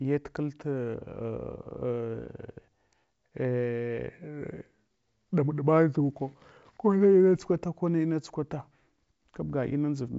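No technical faults can be heard in this speech recording. It has passed through G.722 wideband telephone coding at 64 kbit/s, which leaves at most a faint trace on the sound and nothing above about 7.7 kHz.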